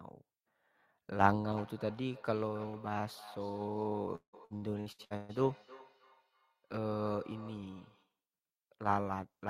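From 1.57 s to 8.18 s, each word returns thin and ringing roughly every 300 ms, about 18 dB below the speech. This is feedback echo between two devices in one room.

From 4.15 s to 5.32 s, the speech turns choppy and robotic. Seven gaps, the longest 174 ms, are patched by stretching earlier sound. This is repeated packet loss.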